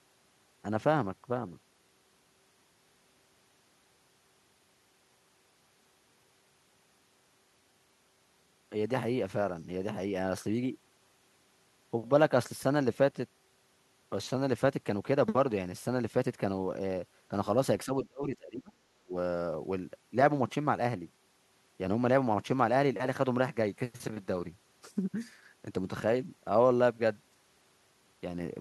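From 17.84 to 19.16 s the speech dips sharply, by around 30 dB at its deepest, likely speech suppressed in double talk by an echo canceller.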